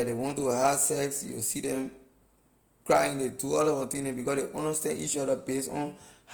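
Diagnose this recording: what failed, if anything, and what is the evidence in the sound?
The codec stage is where this went wrong. From start to finish the speech sounds rough and grainy, with a noisy texture over voiced sounds rather than the swirly, watery holes you'd get from MP3. The top end stays open, reaching about 20.1 kHz, so there's no muffling. That points to Opus compression, likely in its CELT music mode at something around 24 kbps. The encoder is preserving each band's energy but filling starved bands with folded or noise content, and that's the grit you hear.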